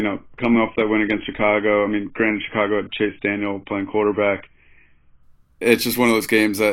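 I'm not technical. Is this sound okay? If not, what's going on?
No. From the start until 5.23 s the speech sounds dull and muffled, with nothing above 3.8 kHz. This is an adaptive stream starting at a low bitrate. At 5.23 s it suddenly turns clearer, without any pause or gap, unlike a dropout.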